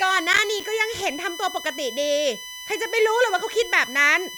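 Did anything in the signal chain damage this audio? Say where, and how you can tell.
Yes, two stages left marks. There's USB whine under the whole clip, a fixed-pitch tone built on 1 kHz with its strongest component up at 3 kHz, sitting roughly 15 dB below the speech. That's the bus's 1 ms frame rate leaking into the analogue side through power or ground, so the fault is in the wiring or supply around the USB interface, not in the audio path itself.

Between 0.33 and 0.64 s there's processor overload crackle, a short gritty burst of tiny hard-edged dropouts where each missed block went to silence. The spacing points to very small buffers, around 5 ms, and something like seven deadlines missed over that stretch. That places it in the driver or buffer stage, with the machine too busy to service audio in time.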